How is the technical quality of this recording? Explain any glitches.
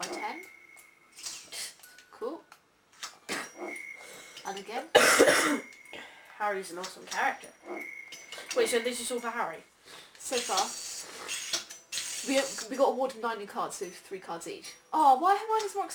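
The technical quality is poor because of one continuous fault. Throughout, crude rate conversion dropped samples without filtering, which fits a 48 to 44.1 kHz change. This leaves a gritty, inharmonic fizz roughly 20 dB below the sound.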